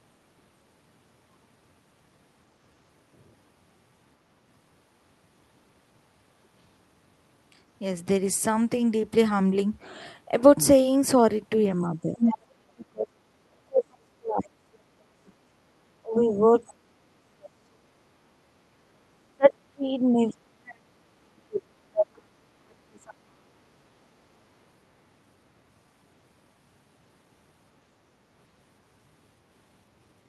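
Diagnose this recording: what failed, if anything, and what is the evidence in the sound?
The speech dips briefly at 11.82–12.19 s, then falls away by roughly 40 dB at 12.71–15.66, 16.01–18.72 and 19.24–24.21 s. This is speech suppressed in double talk, likely from the call-processing echo canceller turning down both its own talker and the loudspeaker echo.

A second, brief voice at about speech level cuts in at 12.2–12.38 s. This is the other side's voice leaking through, likely loudspeaker echo that the canceller left in the microphone signal.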